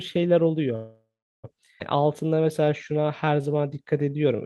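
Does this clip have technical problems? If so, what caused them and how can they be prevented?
Yes, there are three.

From 0.75 to 1.46 s there is a call audio freeze. The last sound carries on as a buzz that fades into about 0.39 s of silence, and then the sound resumes where it stopped. Packets were likely held up in transit, so the jitter buffer ran dry and the receiver filled roughly 0.68 s by extending what it had. Nothing is lost, but the gap is inserted into the stream. Better network prioritisation (QoS) for the call traffic would prevent these stalls.

Between 1.80 and 1.82 s there is a skip ahead. Playback jumps forward with only a tiny join, and about a third of a second of audio is gone. A stretch of audio was dropped, either in transit or by the jitter buffer, which cut the delay by around 0.3 s and spliced the two sides almost directly. A jitter buffer that drains its backlog gradually, rather than dropping chunks, would avoid the jump.

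From 1.97 to 4.38 s there is a jitter buffer slow-down. The sound drags at about 90% speed with the pitch unchanged, and its sounds are drawn out. The buffer was running low or had just raised its target delay, so it rebuilt its reserve by repeating single pitch periods over and over, adding 252 ms in total. Keeping network delay steady so the buffer never runs low would remove the need for this stretching.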